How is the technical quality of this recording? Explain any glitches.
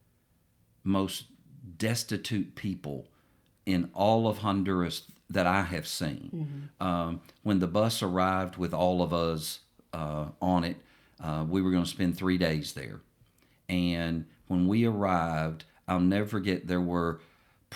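Nothing here calls for explanation, since the speech comes across without any glitches for a listener to pick out.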